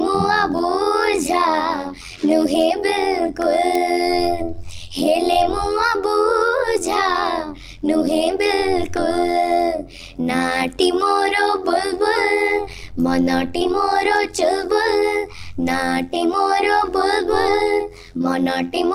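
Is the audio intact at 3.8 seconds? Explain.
No. At 3.75 s there is an uninitialised buffer. A block of about 0.67 ms was played before any audio was written to it, which fits a 32-sample buffer. Leftover memory came out as samples. It sounds like a brief, loud crack.

Overlap-add ripple is also present here, as it is across the whole clip. The frames were rejoined with an overlap whose gain does not stay constant. The level swings by about 11 dB at around 100 Hz, giving a metallic buzz with extra tones around each note.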